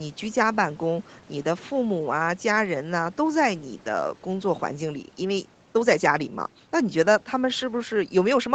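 No faults are audible in this speech; the top end stops at about 8 kHz, as expected from a wideband call path with its normal microphone processing and codec.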